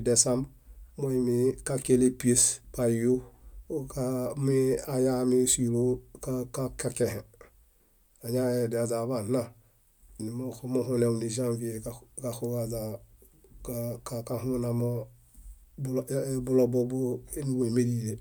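No technical faults are audible.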